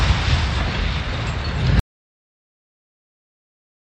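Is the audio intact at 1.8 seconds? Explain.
No: an audio dropout to silence runs from 1.80 s to the end, likely from lost input. Sound cuts to dead silence, leaving a flat waveform and a blank spectrogram.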